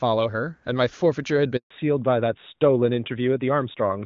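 At 1.57 s the speech cuts out in a handover gap: the call is switched from one network link to another, and for about 140 ms, until 1.70 s, no speech frames get through. The voice fades within a few tens of milliseconds rather than clicking off, then there's dead silence until the new link picks up. Whatever was said in that window is simply lost.

Right after, from 1.70 s to the end, there's a fallback to narrowband. Before the gap the audio has the open, airy top end you'd expect from HD Voice (AMR-WB, and it sounds like a high rate, around 23.85 kbit/s, with little or no codec damage). After the handover, everything above 4 kHz is gone, which fits the new link having landed on plain AMR narrowband at about 12.2 kbit/s. The voice turns noticeably duller and a bit rougher, with the sibilants losing their crispness.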